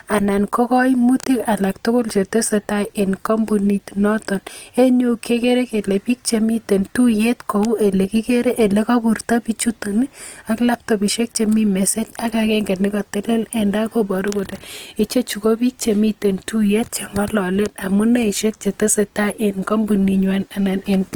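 All the way through the speech there's a plainly audible grainy, rough edge, tones turning noisy rather than swirly, with the top still reaching 20.2 kHz. That's likely Opus compression in music mode, padding starved bands with noise, fitting roughly 24 kbps.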